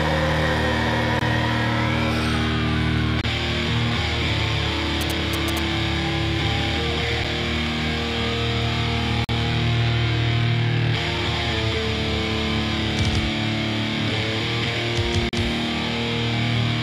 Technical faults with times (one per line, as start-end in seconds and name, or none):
1.19-1.21 gap between stream segments
3.21-3.24 gap between stream segments
5.01-5.59 GSM signalling bursts
7.24 gap between stream segments
9.24-9.29 gap between stream segments
15.29-15.33 gap between stream segments